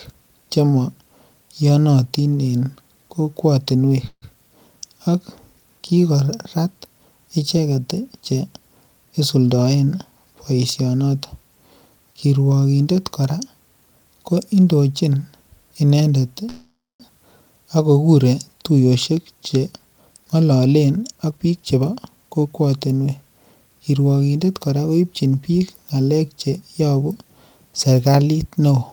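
At 4.07 to 4.35 s the speech stalls into a fading buzz and briefly drops to silence, then resumes intact. This is a call audio freeze, likely from delayed packets draining the jitter buffer, adding about 146 ms of delay. From 9.04 to 10.27 s the speech runs hurried at about 112% speed with unchanged pitch. This is a jitter buffer speed-up, trimming roughly 150 ms of pitch-period slices to cut the backlog. A longer freeze of the same kind follows at 16.49 to 17.02 s, stretching to about 503 ms of filled gap with around 220 ms of silence. Then 18.71 to 22.46 s rushes at about 113% as another speed-up removes roughly half a second.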